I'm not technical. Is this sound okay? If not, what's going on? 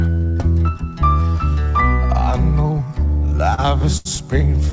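No. Between 3.08 and 4.07 s the sound drags and stutters: it briefly hangs six times, the longest hang lasting 81 ms. These are repeated stalls (stutter): the data arrived late, so the playback ran dry and stretched the last sound until more came. Nothing is actually lost.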